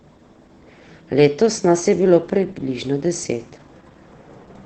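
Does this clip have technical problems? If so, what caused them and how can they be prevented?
Yes. The speech has been through Opus voice compression running at a low bitrate, which fits a rate of about 12 kbps in SILK wideband mode. The encoder restricts the band and models the excitation coarsely, so nothing survives above 8.8 kHz throughout the clip. The speech sounds dull and muffled, with a hoarse, slightly robotic texture that is plainly audible from start to finish. To prevent this, encode speech at a higher Opus bitrate, around 24 kbps or more, or keep an uncompressed copy.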